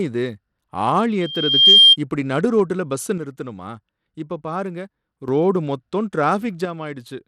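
Throughout this speech recording the treble sounds gritty and flickers in and out, with a rough, coarsely quantised texture. Nothing reaches above 21.1 kHz. The likely cause is Bluetooth SBC compression at a modest bitrate, which fits roughly 96 kbps: the upper sub-bands are starved of bits while the rest are quantised coarsely. From 1.21 to 1.96 s, just before "இப்படி நடு ரோட்டுல பஸ்ஸ", a 3.2 kHz tone swells over about half a second into a loudspeaker feedback squeal, ending well above the speech, about 15 dB. This is a microphone picking up its own loudspeaker until loop gain at that pitch exceeds one. From 3.18 to 5.28 s, after "இப்படி நடு ரோட்டுல பஸ்ஸ" and before "ரோடு மொத்தமும்", and again from 6.65 s to the end, the level abruptly falls by about 6 dB, likely because one channel drops out and the mono sum halves.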